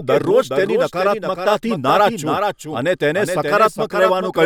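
From the start to the end of the speech, a doubled audio track runs underneath: a second full-band copy trails about 0.4 s behind, only a few decibels quieter. It is likely caused by the same signal being captured again through a slower path. Unlike room echo or reverb, the trailing copy has no decay, no added room colour, and no further repeats, just one clean duplicate out of step.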